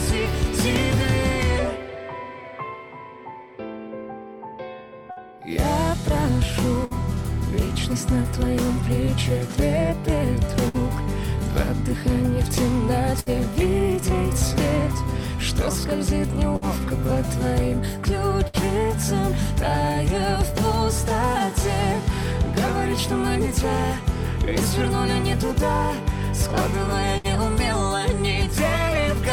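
There's a burst of packet loss at 5.11, 6.85, 10.68, 13.2, 16.56, 18.48 and 27.18 s: about 60 ms goes missing each time, and the receiver stretches the last sound for roughly 55 to 65 ms as a fading buzz or hiss before jumping ahead.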